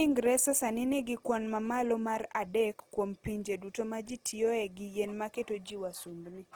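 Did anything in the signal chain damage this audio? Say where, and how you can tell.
Yes. Opus compression is audible throughout, likely introduced at the codec stage. The speech sounds grainy and rough rather than swirly, because bit-starved bands are refilled with noise or folded copies of lower bands. Content still reaches 20.3 kHz, which fits fullband music mode near 16 kbps.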